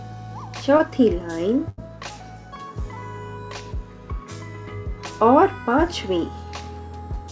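Around 0.78 to 0.81 s there's a short concealed packet loss. About 20 ms of audio didn't reach the decoder in time, so the receiver stretched the preceding sound to cover roughly 14 ms of it and then eased back into the real signal. What you hear is a tiny smear or wobble.

Then from about 1.69 to 1.79 s comes a burst of packet loss, roughly 80 ms missing in a row. The receiver carried the last sound forward for about 81 ms, fading it down as the gap went on, so you get a held, dwindling tail instead of real content before the audio picks up again further along, with that stretch lost. Nothing comes through above 8 kHz, which fits a 64 kbps G.722 call path.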